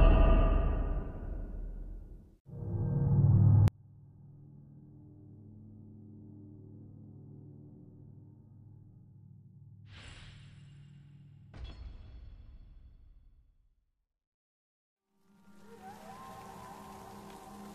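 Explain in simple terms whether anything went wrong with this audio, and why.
From 3.68 s to the end, the sound nearly disappears. The likely cause is one channel inverted, so the two stereo sides cancel each other out.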